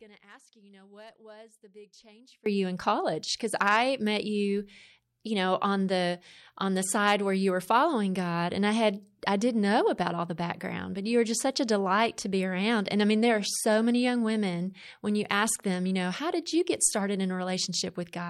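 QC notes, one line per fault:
0.00–2.46 s, audio dropout to a faint residue: the speech is already gone when the clip opens, leaving only a faint leak well below normal level, then snaps back abruptly at "you in college". The path likely stayed live through a signal loss, unlike a pause, which would fall to silence, or a fade, which would ramp smoothly.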